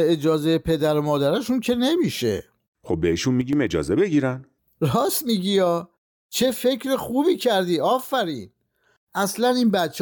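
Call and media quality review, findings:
Sudden gain jump, 3.41 to 3.53 s: speech and noise floor drop together by about 6 dB, then snap back. The level steps instantly, with no ramp. Likely a digital gain change or one-bit shift applied mid-stream somewhere in the processing chain.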